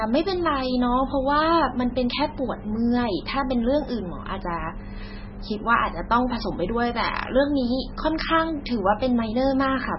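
Throughout, the speech carries heavy MP3 compression damage, likely from a very low bitrate: nothing above 5.6 kHz, with watery, swirling artefacts on top of a steady treble cut.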